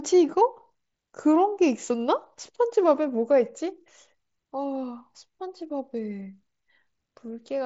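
Nothing goes wrong in this speech clip; it simply comes over a Bluetooth mSBC headset link, which is why there's nothing above about 7.7 kHz.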